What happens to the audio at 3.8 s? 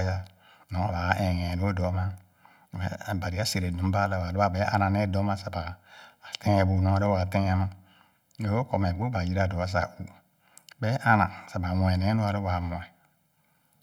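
At 3.8 s you're hearing the channel delay (comb filtering) that runs through the whole speech clip, not a one-off event. One channel lags the other by something like a millisecond and a half, and when the two are folded to mono, whatever they share cancels at a row of evenly spaced frequencies, starting somewhere around 400 Hz. That fixed set of notches is what makes the voice sound hollow and a bit phasey at that point and everywhere else.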